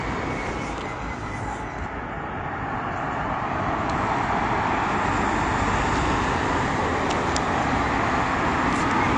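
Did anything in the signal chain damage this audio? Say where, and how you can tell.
Yes, at the codec stage: throughout, nothing exists above 9.9 kHz, and the sound is dull and smeared, which points to likely AAC compression near 32 kbps.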